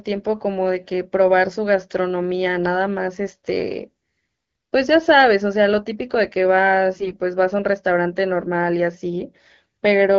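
From 6.97 to 7.16 s, AMR bit errors strike a weak stretch of the link: roughly 7 percent of the less protected bits arrive flipped, while the checksum on the critical bits still passes. The excitation pulses land in the wrong places, and the fine pitch, gain and spectral values drift, across a span that fits about nine 20 ms frames. The speech keeps its rough pitch and level but turns hoarse, scratchy and gargly, standing out against the light wideband coding around it.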